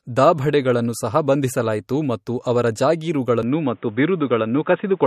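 Throughout the clip, the speech has plainly audible damage of the kind MP3 compression likely leaves when bits run short, consistent with a low bitrate around 48 kbps. The treble stops at 14.5 kHz, and weak detail flickers frame to frame, giving a watery, swirly texture with smeared attacks.

At 3.43 s the input likely switches to a poorer device and stays there to the end. With no gap at the changeover, the band narrows to nothing above 3.8 kHz, so the speech turns dull and boxy at much the same level. A faint new noise floor sits roughly 40 dB below the signal.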